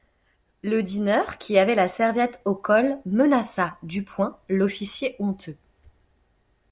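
No technical faults can be heard anywhere in this speech recording. There is nothing in the audio that needs a time or a value noted against it.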